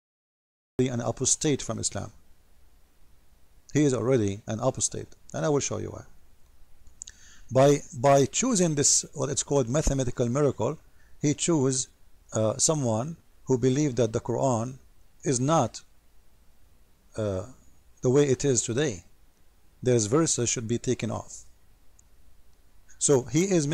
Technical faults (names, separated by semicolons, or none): cut-off start